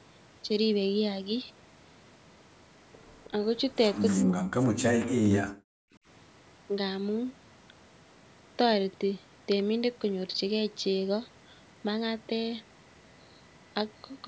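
From 3.25 to 3.3 s, a faint delayed copy of the speech appears, about 315 ms late. This is an echo leak, likely from a loudspeaker echo canceller missing part of its pickup. At 3.29 to 3.33 s the speech dips slightly. From 4.14 to 5.79 s it drops almost to silence. This is speech suppressed in double talk, likely the canceller turning down both its own talker and the loudspeaker echo during overlap.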